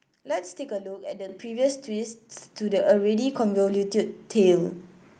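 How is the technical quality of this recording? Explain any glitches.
The main problem is the microphone volume stepping up, twice. At 1.29 s the whole signal jumps about 8 dB louder, and at 2.31 s it jumps about 5 dB more. The call software likely judged the mic too quiet and raised the device's input gain in a single step each time. Because the change happens before any processing, the speech and the background noise get louder together, so you hear a sudden lift rather than a gradual fade-up. The audio also ran through a call codec, and its top end stops around 12 kHz, which points to Opus in super-wideband mode.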